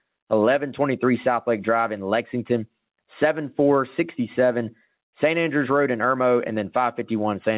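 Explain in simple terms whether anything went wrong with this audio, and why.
There's gain pumping all the way through this speech. Loud and quiet bits end up squashed close together in level. The likely cause is a mic input set way too hot, with a fast limiter or compressor clamping down on each loud sound. The narrow, phone-like tone, with nothing above 4 kHz, is just the call line doing its normal thing.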